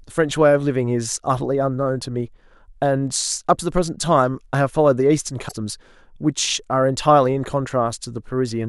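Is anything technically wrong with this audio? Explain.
Yes. Damaged data in a compressed stream at 5.45 to 5.53 s: corrupted bytes in the encoded speech make the decoder misread those frames, lose sync and hunt for the next valid frame header, producing a brief chirp, squawk, click or short hole.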